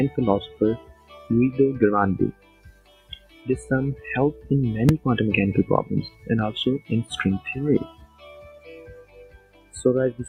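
A speech-tuned noise suppressor applied to music or sounds runs throughout, treating sustained content as noise and swinging the level by about 15 dB. The waveform envelope pumps, and held partials fade on a spectrogram. Sound cut by the noise suppressor dips from 0.78 to 1.3 s (about 13 dB) and from 2.32 to 3.47 s (about 12 dB), where tails shrink and spectral energy hollows out. At 4.89 s, invalid numbers at full scale pin the output to one extreme value for about 2.7 ms, consistent with a 128-sample block. It is heard as one sharp bang and appears as a thin slab standing far beyond the surrounding peaks in the waveform and a vertical broadband stripe on the spectrogram. Further suppressor cuts follow at 6.1 to 6.28 s (about 9 dB), 7.89 to 8.67 s (about 12 dB) and 9.01 to 9.74 s (about 14 dB). Each shows the same sagging envelope and dimmed spectral band.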